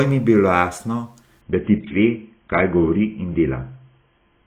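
Speech, with an adaptive stream dropping to a lower bitrate at 1.41 s and staying there to the end. The switch is abrupt, with no gap or dropout. After it, nothing remains above about 3.8 kHz, and the speech turns dull, with more codec artefacts. The drop in detail fits a step from roughly 96 kbit/s down to 16 kbit/s AAC, as a slowing connection would force.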